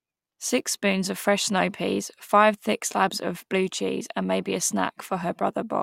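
No technical faults can be heard anywhere in this speech recording.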